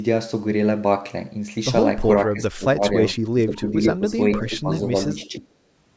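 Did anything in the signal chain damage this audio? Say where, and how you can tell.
Yes. The damage is in the call processing stage. Speech suppressed in double talk appears at 2.29–2.98, 3.14–3.76, 3.95–4.06, 4.38–4.71 and 4.94–5.46 s. The level dips by about 20 dB in the first three and about 10 dB later. The likely cause is an echo canceller turning down the near side while the far side talks.

An echo leak sits at 5.20–5.26 s. It is a faint delayed copy, about 30 dB below the speech, arriving 462 ms after the original. This points to a loudspeaker path whose echo canceller likely failed to remove everything the microphone picked up.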